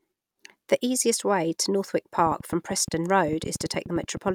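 A speech recording with a train of clicks from 2.19 s to 4.31 s. About twenty sharp ticks arrive near 10 per second, unevenly spaced, and they stand a few decibels above the speech. The likely cause is interference from nearby equipment or a faulty connection or power supply.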